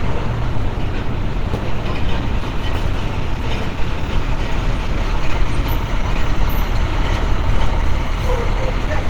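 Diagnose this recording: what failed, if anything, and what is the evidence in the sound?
The failure is at the codec stage. Opus compression damage is plainly audible throughout. The sound comes across muffled, hoarse and grainy, as in Opus hybrid mode at a starved rate, which fits roughly 16 kbps. Bandwidth stays full, reaching about 20.1 kHz. Low-bitrate encoding is the likely cause.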